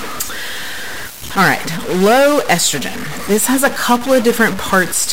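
Speech runs with a harsh, buzzy distortion from start to finish, most likely a stuck bit in the converter or data line, forcing a fixed step of about -20 dBFS onto many samples. On a waveform, pauses show noise instead of silence. A spectrogram shows broadband noise spread across all frequencies, even between phrases.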